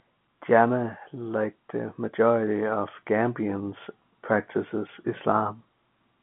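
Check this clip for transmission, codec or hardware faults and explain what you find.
No transmission, codec or hardware faults show up in this speech, which carries the band-limited sound of G.711 telephone coding, with the line band running from about 150 Hz to 3.4 kHz and nothing above roughly 3.8 kHz.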